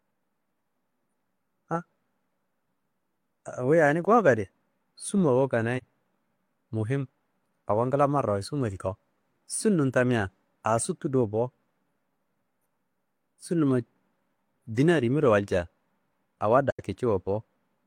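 AAC frame loss with muting at 5.77 to 5.84 s and 16.70 to 16.80 s: the decoder zeroed missing frames, so the speech fades into soft-edged gaps of about 43 ms and 85 ms, fitting one and two lost frames.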